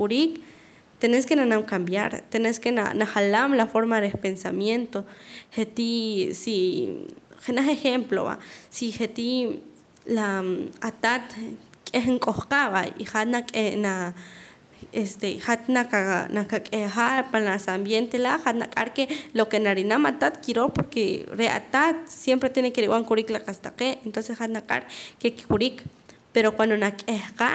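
No technical faults can be heard in the speech, which carries the ordinary sound of a call path, with the lowest bass trimmed by the microphone processing and no content above 8 kHz, as fits a wideband call codec.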